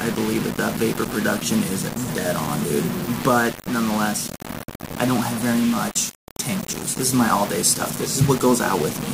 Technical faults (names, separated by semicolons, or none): low bit depth without dither